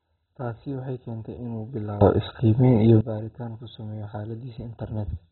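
Throughout the speech, the encoder, likely an MP2 compression stage, has too few bits to spend. It has shut off every sub-band above 4 kHz and coarsely quantised the rest, which fits a rate near 16 kbps. The speech sounds dull and muffled, with a gurgling, granular roughness.

From 2.01 s to 3.01 s, a sudden gain jump, likely a level change applied without any ramp, raises the digital gain by about 18 dB in a single step. The speech and its background noise leap louder together, then fall back just as abruptly.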